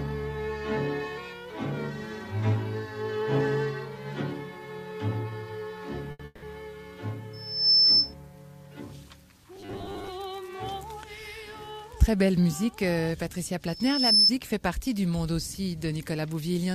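At 6.11 s a short stall from a late packet holds the last sound for 80 ms. The spectrogram shows a frozen spectral slice with a slight dip, then the sound resumes. From 6.25 s to 6.44 s a call audio freeze, likely from delayed packets, stretches a fading buzz over 170 ms, ending in about 10 ms of flat silence on the waveform. From 7.33 s to 8.14 s a loudspeaker feedback squeal appears as a single 5.3 kHz line that builds over roughly 0.4 s to about 10 dB above the surrounding audio. Between 9.56 s and 10.09 s the sound turns into robotic sound from repeated short buffers, with a rigid 100 Hz buzz visible as evenly spaced harmonics. This likely comes from repeating a 10 ms buffer, with about half the material replaced. From 13.66 s to 14.32 s the same 5.3 kHz feedback squeal returns, swelling over about half a second to roughly 10 dB above the rest of the audio.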